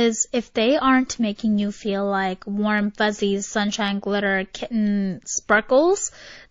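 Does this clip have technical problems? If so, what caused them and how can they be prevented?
Yes. MP3 compression damage runs through the whole speech clip, and its character is plainly audible: a watery, swirly quality, metallic chirping on s sounds, and softened consonant attacks. It is likely the result of MP3 encoding at a very low rate, and the thinness fits something like 32 kbps. The encoder seems to have run short of bits, so it dropped weak frequency components that then flicker on and off between frames. On a spectrogram this shows as patchy, blinking holes in the frequency content. To prevent it, encode at a much higher bitrate or keep the speech in a lossless format.

A pre-echo sits just before an attack at 1.36 to 1.39 s. A hiss rises about 10 dB above the background for roughly 27 ms ahead of the onset, which makes the attack sound smeared. The encoder spreads its quantisation noise across a whole block, and here that block fits a long window of about 72 ms with no switch to shorter blocks. 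The noise sized for the loud attack therefore leaks into the quiet moment before it. A waveform shows a small fuzzy ramp of noise ahead of the sharp transient, and a spectrogram shows a broadband smudge preceding the onset. To prevent it, use an encoder that switches to short blocks on transients, together with a higher bitrate.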